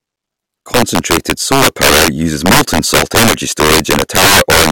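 Speech, marred throughout by integer overflow: the signal was pushed about 12 dB past full scale, and instead of being held at the ceiling, every peak that crossed it wrapped around to the opposite extreme. Roughly 7 percent of the samples are affected, so the louder syllables break into violent, snapping cracks. Ordinary clipping would flatten those peaks into a duller buzz. Here each overshoot leaps across the entire range, giving a far sharper, harsher crack.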